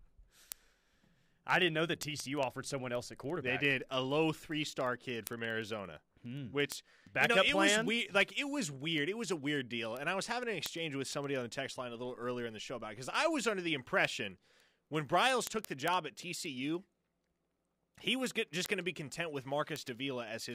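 A steady train of ticks, about twenty per second, runs from 0.11 s to 20.51 s under the speech. These are word clock ticks: the receiving device runs on its own clock, a few hundred parts per million off the sender's, so single samples are repeatedly dropped or repeated.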